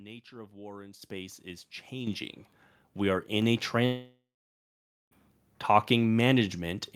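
Microphone volume stepped up at 1.02 s, just after "of war in", then again at 2.07 s and 3.42 s. Each time the call software judged the input too quiet and raised the device's capture volume in a single jump: about 10 dB, then about 8 dB, then about 3 dB. Because the change happens before any processing, the speech and the background noise lift together, abruptly.

A long network dropout follows from 3.85 s to 5.13 s. Roughly 1.3 s of audio failed to arrive, likely through lost packets, and the receiver covered the gap by extending the last sound as a buzz or hiss that fades over a few tenths of a second. The final 0.89 s of the gap is silent. Speech then resumes further along, with the missing stretch gone.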